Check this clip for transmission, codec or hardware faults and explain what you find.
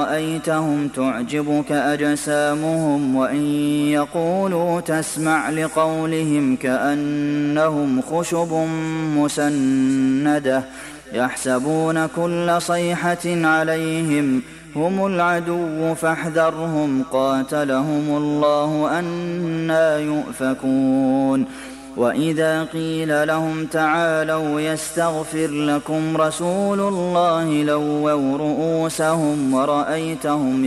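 No transmission, codec or hardware faults are audible here.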